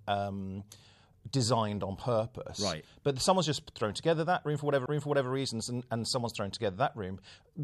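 At 4.86 s, just after "thrown together that", there is a CD skip. The laser lost its place on the disc's spiral track and landed on another turn. The player muted for a very short moment, roughly 10 ms, then resumed reading from the new spot. This is heard as a tick or short gap followed by an abrupt jump in the speech. It then continues with "reasons and and someone's" from a different place.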